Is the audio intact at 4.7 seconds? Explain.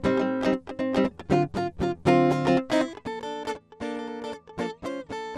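No. From 4.70 to 4.73 s the music breaks into DAB burbling: bit errors, a tiny fraction of them, slip past error correction and corrupt sub-band samples and scale factors. The result is a brief burst of noise in single sub-bands, seen on a spectrogram as isolated blocky band flashes. About four frames are corrupted.

Underneath, the dull, gurgling texture is likely MP2 compression at a rate around 80 kbps. Starved upper sub-bands switch off and flicker, so a spectrogram shows a ragged, patchy high-frequency ceiling and coarse banded energy rather than smooth detail.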